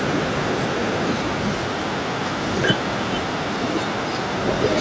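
From start to finish, every phrase is trailed about a third of a second later by a faint, thin copy roughly 18 dB down: echo with no canceller.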